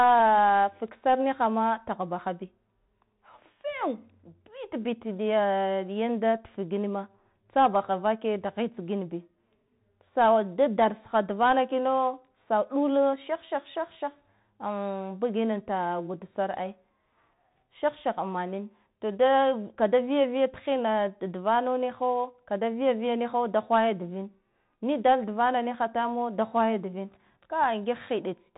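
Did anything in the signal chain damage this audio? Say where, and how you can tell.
Yes, at the codec: Bluetooth CVSD headset coding throughout the speech, with nothing above 3.8 kHz, scratchy s sounds and granular hiss from one-bit delta steps, consistent with 64 kbps CVSD.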